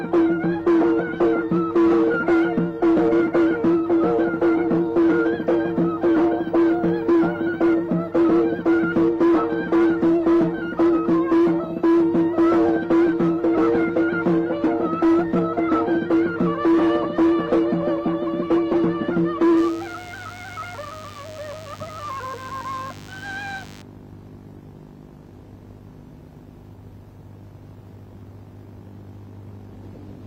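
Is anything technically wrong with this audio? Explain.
Yes. From 19.57 to 23.82 s there is DECT cordless phone buzz. A nearby DECT handset or base station sends a short radio burst every 10 ms, which the audio circuitry rectifies into the signal. This produces a thin, steady 100 Hz buzz full of harmonics, roughly 25 dB below the main sound.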